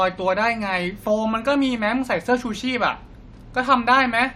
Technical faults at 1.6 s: none

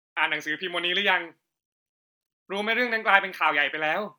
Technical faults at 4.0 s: none

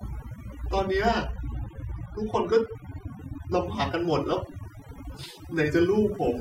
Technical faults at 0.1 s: overdone noise removal

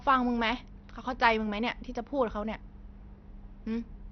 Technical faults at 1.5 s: MP2 compression

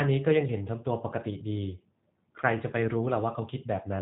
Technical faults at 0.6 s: G.729 codec

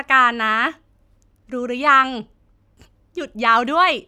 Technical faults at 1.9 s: none

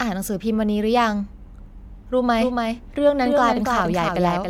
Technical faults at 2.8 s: generation loss; doubled audio track

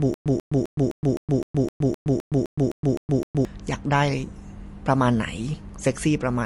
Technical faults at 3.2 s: MP3 compression; stutter with silent gaps

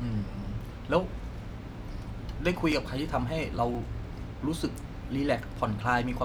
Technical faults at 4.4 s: none

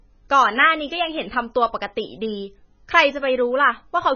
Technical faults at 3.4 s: MP3 compression

